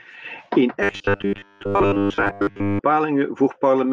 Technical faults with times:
0.83-2.80 robotic sound from repeated short buffers

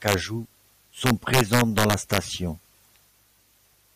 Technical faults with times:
0.08-0.14 integer overflow
1.06-2.18 integer overflow

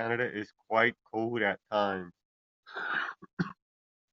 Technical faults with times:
0.22-4.03 clock slip clicks

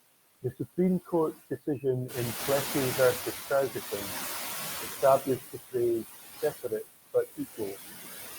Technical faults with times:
0.00-8.39 overdone noise removal
0.00-8.39 noise suppressor artifacts
2.08-5.18 noise suppressor catching up
5.20-5.75 speech cut by the noise suppressor
6.42-6.85 speech cut by the noise suppressor

